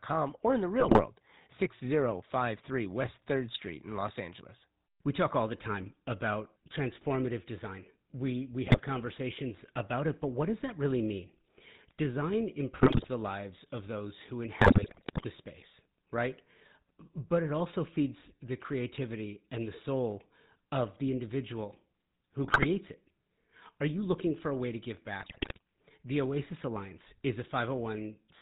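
Speech here, and the whole clip has gone through the GSM full-rate codec. The damage is plainly audible: a buzzy, gravelly roughness sits on the voice because the codec rebuilds the vocal tract from a filter driven by a thinned-out pulse excitation. Nothing gets through above 4 kHz, so everything sounds boxed-in, and the texture fits the old 13 kbps full-rate coder. On top of that there are six bursts of GSM bit errors, at 0.8–1.05 s, 8.66–8.79 s, 12.74–13.09 s, 14.6–15.25 s, 22.44–22.66 s and 25.2–25.58 s. In each, the speech breaks into squawks, pops and gargling. That's corrupted bits landing in the decoder's filter, pitch and gain parameters, so the spectrum warps or the level jumps for those frames. The 14.6 s burst is the longest at about two thirds of a second.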